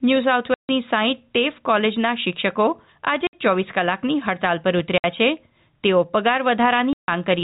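Speech over what sounds like telephone-band G.711 coding, and it's got packet loss filled with silence: four hard dropouts, at 0.54 to 0.69 s, 3.27 to 3.33 s, 4.98 to 5.04 s and 6.93 to 7.08 s. The gaps run 150, 60, 60 and 150 ms, all multiples of 30 ms, which fits 30 ms packets going missing and the receiver just playing nothing in their place.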